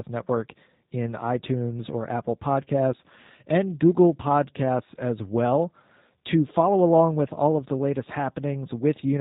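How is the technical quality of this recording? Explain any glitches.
The recording's technical quality is limited by one fault that runs from start to finish: G.729 codec damage, plainly audible. The speech is rebuilt from a vocal tract filter, a pitch predictor and a few pulses per 10 ms frame, consistent with the 8 kbit/s G.729A variant. Everything above 4 kHz is gone, and the voice sounds rough, buzzy and slightly synthetic. A plain telephone band-limit would keep the voice natural, so the synthetic grain is what marks a codec.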